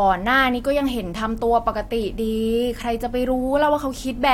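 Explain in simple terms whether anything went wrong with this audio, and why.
Nothing went wrong; the recording has no audible faults.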